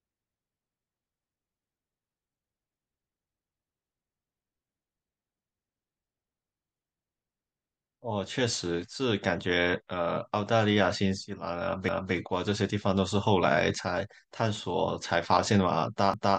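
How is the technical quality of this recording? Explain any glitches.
The recording has one recurring glitch. Overlapping chunks at 11.89–12.14 s and 16.14–16.38 s: 4 s processing chunks begin 250 ms early, so a quarter-second of speech repeats as an audible stutter at each join.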